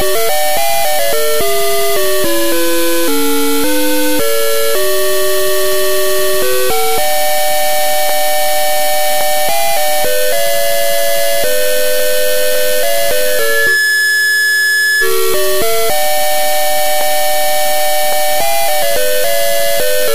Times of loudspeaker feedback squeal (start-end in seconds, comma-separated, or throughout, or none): 13.25-15.13